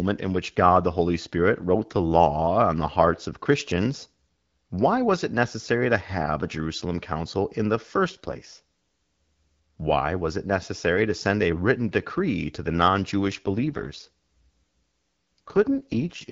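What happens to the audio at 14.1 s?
At 14.1 s the call is in an AMR rate drop, running from 13.28 s to the end. The network has switched the AMR-WB codec down to a lower mode, consistent with a fall from 12.65 to 6.6 kbit/s, so the speech keeps its full band without gaps but turns rough, raspy and synthetic.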